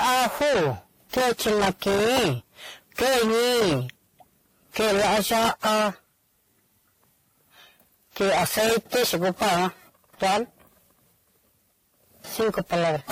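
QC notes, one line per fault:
Throughout: transcoding between lossy codecs, likely an AAC encode at around 48 kbit/s re-encoded as WMA at around 64 kbit/s. Two sets of smeared, swirly artefacts stack, and nothing remains above 16.6 kHz.
0.00–0.72, 1.13–2.34, 2.98–3.81, 4.76–5.89, 8.17–9.68, 10.22–10.42, 12.40–13.11 s: hard clipping. A stage overdriven by about 16 to 30 dB flattens every peak, adding harsh fuzz to the speech, worst at the start.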